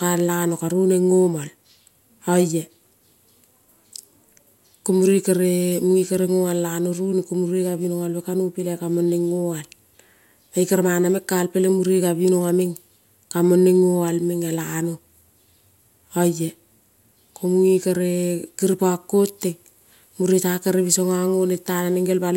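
No technical faults can be heard anywhere in this recording.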